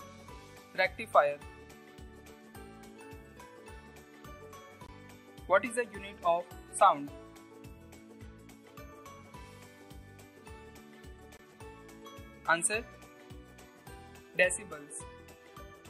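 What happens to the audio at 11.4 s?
Right around there, from 11.37 to 11.39 s, the sound drops out in a block of digital silence about 21 ms long, which fits a 1024-sample buffer. The audio cuts out and back with no fade, so it comes across as a short hole, from either a late buffer fill or invalid numbers.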